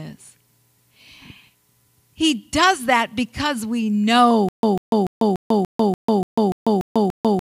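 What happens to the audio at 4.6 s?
At 4.6 s the speech has fallen into a stutter with silent gaps, running from 4.49 s to the end at 7.48 s. A fragment of about 145 ms repeats every 291 ms, with 145 ms of silence between, ten times in all. The likely cause is a stalled stream replaying its last buffer. The waveform shows identical blocks separated by flat silent stretches, and the spectrogram shows matching striped columns.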